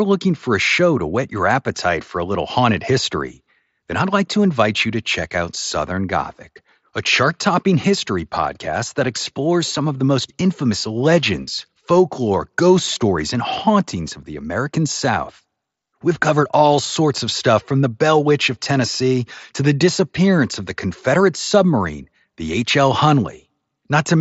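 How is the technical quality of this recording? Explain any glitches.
No glitches turn up anywhere in this speech recording. It comes through a Bluetooth mSBC headset link, so the sound stops at about 8 kHz and carries a faint graininess on the louder moments, the normal light wear of that wideband headset codec.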